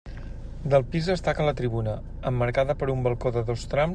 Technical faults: none

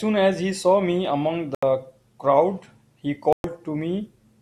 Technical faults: Bluetooth stall

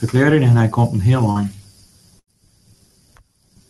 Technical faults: short concealed packet loss; burst of packet loss

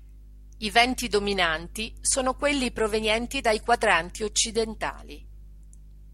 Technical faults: none

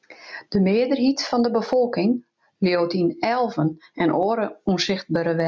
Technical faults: gain pumping

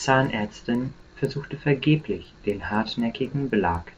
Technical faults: resampler restarted on every block

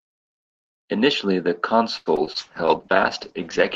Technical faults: repeated packet loss (robotic sound); call bitrate drop

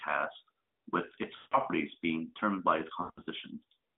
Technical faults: lost AMR speech frames

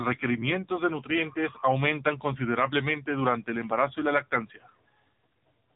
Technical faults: AMR narrowband mobile codec; bit error spike

